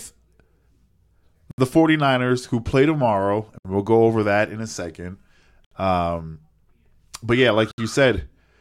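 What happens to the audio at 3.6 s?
The speech drops into a sudden silence of about 67 ms, from 3.58 to 3.65 s, between "who play tomorrow" and "we'll go over that", then resumes where it stopped. This is a gap at a join of encoded pieces: untrimmed encoder start delay and end padding left in.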